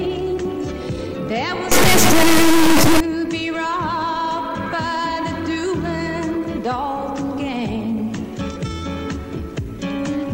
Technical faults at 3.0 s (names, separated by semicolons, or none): integer read as float